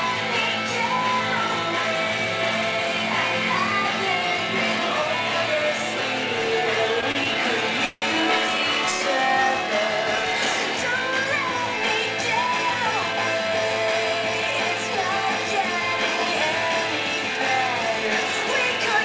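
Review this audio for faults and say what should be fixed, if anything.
Repeated stalls (stutter) run from 7.01 to 7.38 s. Four short gaps open as packets arrive late or more slowly than they are played, so the jitter buffer keeps running empty and the receiver stretches the last sound to cover each one. Together they fill 69 ms, the longest 32 ms, about a fifth of that stretch. Nothing is lost, but the sound catches and drags. What separates this from a single freeze is the several brief hold-ups in a row instead of one longer break. A larger or more adaptive jitter buffer would ride out this arrival variation.

A call audio freeze follows at 7.86 to 8.05 s. The sound halts while the last moment is carried on and fades, and 40 ms of the 161 ms fill drop to silence before the audio resumes exactly where it stopped. The likely cause is packets held up in transit emptying the jitter buffer, which pushes the delay up by 161 ms. 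Unlike the stutter, this is one continuous gap, long enough to fade out, and nothing is skipped. Reducing network congestion or prioritising the call traffic would prevent these hold-ups.

A jitter buffer speed-up runs from 12.33 to 13.14 s. Having built up surplus delay, the receiver trims about 70 ms by cutting many tiny pitch-period slices in succession. The audio plays at 108% speed with the pitch unchanged, so it sounds hurried rather than raised. This is what tells it apart from a playback-rate error, which would shift the pitch too. The same stretch of sound is shortened rather than broken up, unlike the gaps earlier. Gentler, more gradual delay reduction, spread over a longer time, would keep the tempo steady.

The call path itself carries nothing above 8 kHz, which fits G.722 at 64 kbps.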